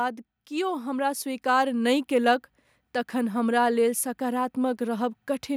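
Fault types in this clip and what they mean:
Automatic gain rising: the automatic gain control judged the incoming level too low and raised its gain upward over roughly a second and a half, from 0.48 s to 2.03 s, adding about 7 dB in total. Because the gain acts on everything at once, the speech and the background noise swell together in a slow climb, settling at the louder level just before "कयलक तखन हमरा लेल".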